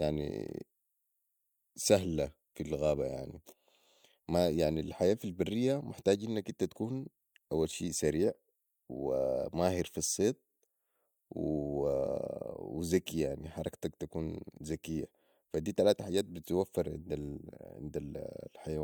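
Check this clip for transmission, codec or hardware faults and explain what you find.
Nothing stands out here: the speech comes through steadily with no dropouts, glitches or other transmission, codec or hardware trouble to point to.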